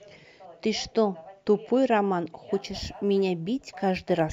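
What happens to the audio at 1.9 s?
Nothing goes wrong at 1.9 s: the speech runs on intact through that moment with no fault to be heard.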